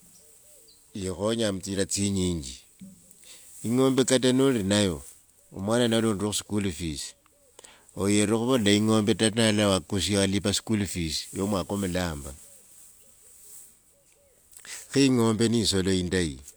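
Nothing in the way of a technical fault turns up anywhere in this speech recording, so there's nothing here to point to.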